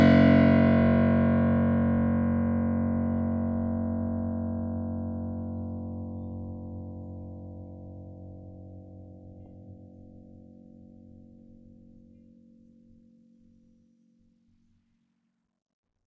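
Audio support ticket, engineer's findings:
Engineer's findings: no fault found in the music on this ticket.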